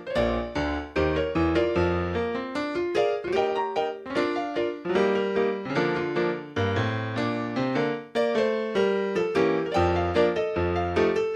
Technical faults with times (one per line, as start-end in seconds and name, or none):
3.27-4.08 overlap-add ripple